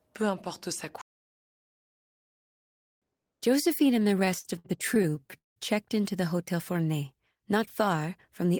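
Speech clip with two faults. A playback stall, likely from the player running dry or its thread being blocked, cuts the output to silence for 2 seconds from 1.01 to 3.02 s, right after "peu importe sa". Repeated stalls (stutter) follow between 3.99 and 5.58 s, just before "checked into the": packets arrived late, so the jitter buffer emptied 18 times. Each gap was filled by stretching the last sound, with the longest lasting 186 ms and about 0.47 s filled overall, so nothing is lost but the speech drags and stutters.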